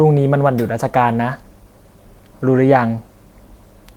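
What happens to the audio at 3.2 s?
Nothing goes wrong at 3.2 s; the speech is intact there, with no dropout, click, distortion or other fault at that moment.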